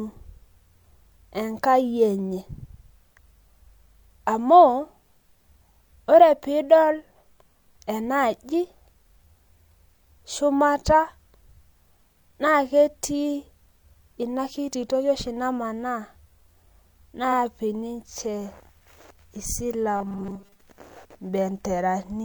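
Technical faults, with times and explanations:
19.96 to 20.60 s, robotic sound from repeated short buffers: the speech turns into a rigid, metallic 200 Hz buzz that loosely follows the words. Playback was likely starved of new audio and looped a stretch of about 5 ms for most of this span, skipping the real audio.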